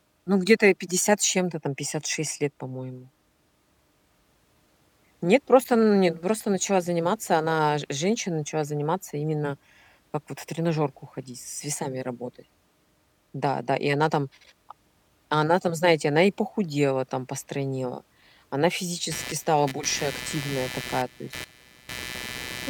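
From 19.11 s to the end of the clip, a raspy buzz with a scratchy, chirping edge rises under the speech, pulsing at something like 150 times per second and sitting only around 10 dB below the voice. This is computer activity noise: shifting load in the processor, graphics card or mouse disturbs the ground the audio circuit shares, so the buzz follows the machine's workload rather than anything in the speech.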